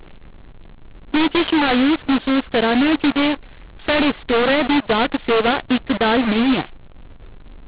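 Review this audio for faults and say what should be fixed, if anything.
The speech is harsh and gritty from start to finish, a mu-law and A-law mix-up in the telephone path. The samples were encoded with mu-law but decoded with the A-law table, so the codes map to the wrong amplitudes. Some levels come out too loud and others too quiet, which distorts the waveform. Quiet samples are pushed well above silence, so the pauses carry a noise floor. The band still stops at 4 kHz, consistent with 8 kHz telephone sampling. To prevent this, carry the G.711 law explicitly in the stream or session metadata and make the decoder select its table from that field.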